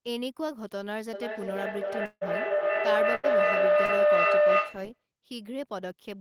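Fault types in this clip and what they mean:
Feedback howl: Two devices in the same room on one call make a loop from loudspeaker back into a microphone, and each pass comes back louder. Here a tone of roughly 700 Hz grows from 1.13 s to 5.07 s, peaking about 11 dB above the speech, with the loop repeating about every 0.3 s. Unlike a dropout's buzz, it rises instead of fading and stays at one pitch.
Long network dropout: A stretch of audio never arrived, and the receiver covered it by stretching the last sound. At 2.05 s the speech is carried on by a fill that thins out, lasting about 157 ms, with roughly 50 ms of near silence before the audio returns at 2.23 s. About 160 ms of speech is simply gone. The steady fade of the fill points to a likely network outage.
Burst of packet loss: A short run of packets failed to arrive in time, so the decoder held and faded the last sound across the hole. 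From 3.15 s to 3.25 s the speech is replaced by a held, dimming fill for about 83 ms, then picks up again with roughly 80 ms missing. It is shorter than the dropout at 2.05 s.
Short concealed packet loss: A few hundredths of a second reached the decoder too late, and the gap was patched by continuing the preceding sound and blending back into real audio. At 3.85 s about 40 ms is missing, covered by a 34 ms fill that sounds like a brief smear or wobble, not a buzz.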